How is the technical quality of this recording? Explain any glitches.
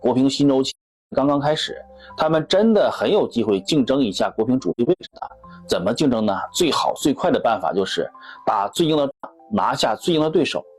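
The recording has audible dropouts at three points: from 0.67 to 1.14 s, from 4.70 to 5.31 s, and from 9.11 to 9.25 s. The audio fades to silence and back with soft edges. The middle dropout is broken up into several short gaps, the longest about a tenth of a second. These are AAC frame losses with muting. The decoder zeroed the missing frames, each about 43 ms, and its overlapping windows smoothed the edges into fades.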